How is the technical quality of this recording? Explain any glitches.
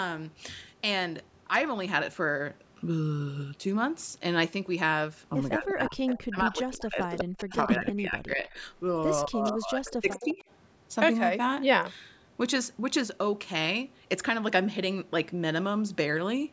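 The recording has two recurring call-processing faults between about 5.6 and 10.4 seconds, with nothing above 8 kHz from the call microphone path.

Speech suppressed in double talk, at 5.56–6.0 s, 6.28–8.57 s and 9.27–10.43 s: the speech dips by about 20 to 30 dB. This is likely an echo canceller ducking the talker while both sides speak. It differs from echo by removing sound rather than adding it.

Echo leak, at 6.06–6.18 s, 7.38–7.43 s, 8.47–8.6 s, 9.46–9.52 s and 10.16–10.42 s: copies of the speech trail it by 201 ms, about 10 to 30 dB down. This is likely residual loudspeaker pickup that the canceller missed.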